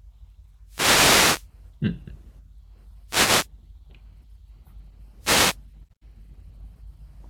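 Speech recorded over what sounds like an analogue wireless mic, and it takes three wireless microphone noise hits: roughly 0.65 to 1.50 s, 3.07 to 3.49 s, and 5.20 to 5.58 s. Each one is a short swish of static riding over the voice. That's the radio link fading as reflected signals cancel at the receiver, so its own noise floor comes up before the signal recovers.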